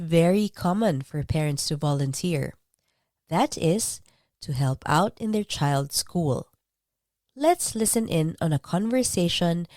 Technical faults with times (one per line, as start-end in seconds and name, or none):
7.87 lost LE Audio frames